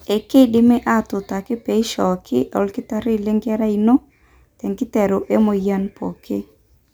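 No technical faults can be heard anywhere in the speech recording.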